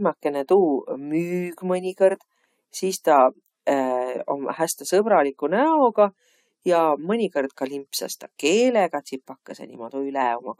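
No technical faults occur anywhere in the recording, so there is nothing to describe in time order.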